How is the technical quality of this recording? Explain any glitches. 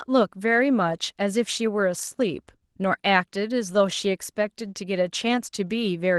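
No glitches or faults audible.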